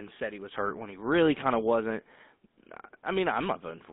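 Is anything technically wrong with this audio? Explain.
Yes. Throughout the clip, the speech has passed through a GSM full-rate codec, with damage that is plainly audible. The codec reduces speech to a vocal-tract filter driven by a sparse, regularly spaced pulse excitation, at a rate that fits roughly 13 kbps, and the line keeps only about 150 Hz to 3.6 kHz. That rebuilt pulse train gives the voice a buzzy, gravelly roughness, while the narrow band leaves it thin and muffled.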